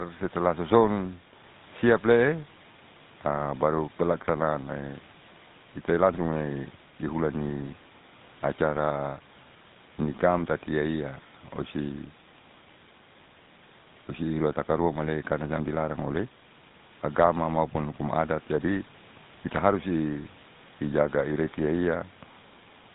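GSM full-rate codec damage runs throughout the speech, from start to finish, and is plainly audible. The coder models the vocal tract as a filter and excites it with evenly spaced pulses, keeping only every third excitation sample, so fine detail in the source is replaced by a coarse pulse train. The result is a buzzy, gravelly roughness on the voice, and nothing above 4 kHz survives. This character fits a 13 kbps full-rate coder.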